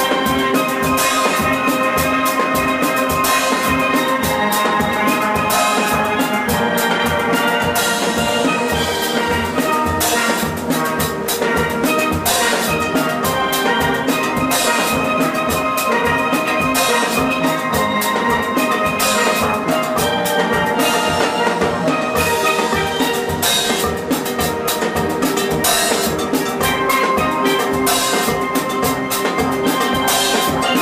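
No technical faults can be heard anywhere in the recording.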